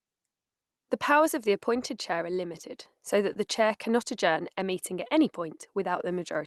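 At 2.61 to 2.65 s and again at 3.33 to 3.37 s, short concealed packet loss leaves a brief smeared wobble in the speech. About 20 ms never arrived, so the Opus decoder of the call path extended the preceding sound and crossfaded back. On a spectrogram, each event shows briefly stretched, blurred harmonics below the roughly 12 kHz ceiling. The waveform there looks oddly repetitive.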